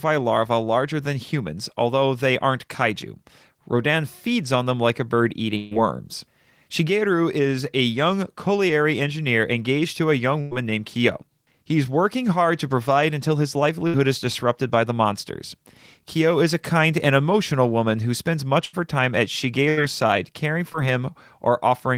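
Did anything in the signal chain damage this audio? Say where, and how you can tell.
Yes, at the network stage. Bursts of packet loss occur at 5.57 s after "them like a bird", 10.41 s, 13.87 s between "to provide until his" and "is disrupted by the", 18.65 s between "woman who spends much" and "her time at", and 19.69 s. The decoder extends the last sound and fades it, then jumps ahead, dropping 60 to 140 ms each time.

A short concealed packet loss at 20.73 to 20.76 s, also from the network, drops only about 20 ms. The receiver patches it by briefly continuing the preceding sound before blending back, which leaves a small smear or wobble rather than an audible gap.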